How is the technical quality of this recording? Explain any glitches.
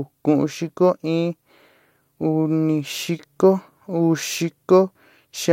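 No glitches or technical faults can be heard here.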